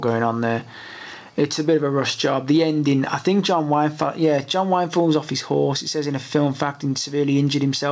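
Nothing stood out on listening; the sound comes across as audio that has passed through a call's microphone processing and a G.722 call codec, with nothing above 8 kHz.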